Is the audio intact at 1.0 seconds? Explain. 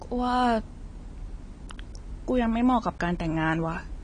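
No. At 1.0 seconds, as across the whole clip, the speech carries AAC compression damage, likely from AAC-LC coding at a low bitrate, which fits about 32 kbps. With too few bits, the encoder drops everything above 10.1 kHz and quantises the remaining spectrum coarsely, leaving gaps between bands or filling them with substitute noise. The result is plainly audible: the speech sounds dull and smeared, with a warbling, fizzy texture on sustained sounds and sibilants.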